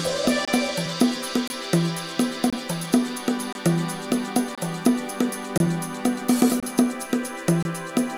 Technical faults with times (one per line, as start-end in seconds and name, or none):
0.45-0.48 gap between chunks
1.48-1.50 gap between chunks
2.50-2.53 gap between chunks
3.53-3.55 gap between chunks
4.55-4.58 gap between chunks
5.58-5.60 gap between chunks
6.60-6.63 gap between chunks
7.63-7.65 gap between chunks